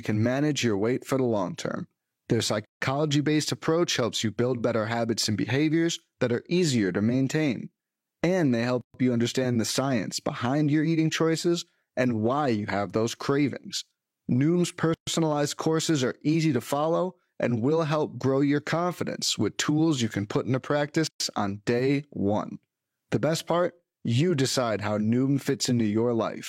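A speech clip broken by a gap at a join of encoded pieces, four times at a steady 6 s spacing: 2.65–2.81 s (about 160 ms), then 8.81–8.94 s, 14.94–15.07 s and 21.07–21.20 s (about 130 ms each). Separately encoded segments were joined with the encoder's start delay and end padding left in. On a waveform each gap is a flat stretch with abrupt, slightly smeared edges; a spectrogram shows a clean vertical blank band before speech resumes where it stopped.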